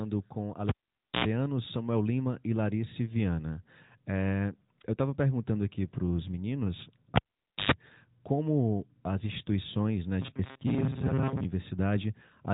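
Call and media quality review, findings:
Cable pulled and plugged in, 0.69–1.25 s. Pop, about 0.51 s near-silence, 86 ms 60 Hz mains buzz from tip-only contact, second pop. Input connector or lead. Waveform: spikes framing a flat gap. Spectrogram: vertical broadband lines, horizontal hum harmonics.

Cable pulled and plugged in, 7.16–7.72 s, between "aqui para os meninos" and "como as instituições né". Same signature: about 0.51 s dropout, 113 ms 50 Hz buzz. Reseat or replace cable.

Robotic sound from repeated short buffers, 10.21–11.44 s, after "como as instituições né". Metallic 134 Hz buzz, roughly half the audio skipped. Likely audio buffer underrun, with 7.5 ms segments replayed. Waveform: identical repeating cycles. Spectrogram: rigid 134 Hz comb within the 3.8 kHz AMR-NB band.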